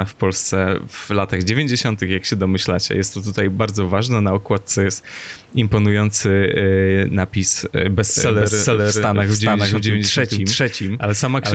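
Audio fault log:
throughout: gain pumping. The level moves by roughly 10 dB. Loud and quiet passages sit close together and sound squashed. This likely comes from input gain set too high, with a fast limiter pulling it back.
8.10 to end: doubled audio track. From 8.10 s a second, full-band copy of the speech runs about 0.4 s behind the first, at roughly equal level. It arrives dry, with no decay, and starts abruptly. A slower second capture path likely mixed it back in.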